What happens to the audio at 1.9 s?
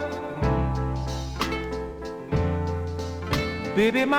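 AAC frame loss with concealment occurs from 1.89 to 1.99 s: about 85 ms of data, which fits two lost frames, is missing, and the decoder rebuilds the gap from the last good spectrum, leaving a brief smeared, noisy or phasey patch in the sound.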